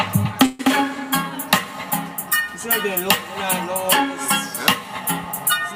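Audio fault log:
0.45–0.61 s, call audio freeze: the sound stops advancing for about 140 ms and is held as a continuation of its last moment, a fading buzz rather than a hard dropout, with no stretch of true silence. Playback then resumes exactly where it left off, so nothing is lost but everything after it lands about 140 ms later. This likely comes from packets stalling in transit and the jitter buffer running dry.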